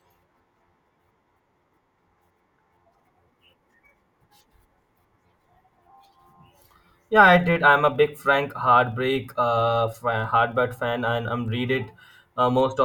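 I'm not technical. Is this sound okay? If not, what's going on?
No. A filter restarted on every block runs through the whole speech clip, from start to finish. The audio is processed in short chunks, and a filter in the chain wipes its memory at the start of each chunk, so every chunk begins with a tiny jolt. These jolts come 25 times a second, about one every 40 ms, which you hear as a steady low buzz or rapid ticking that gets louder when the speech does.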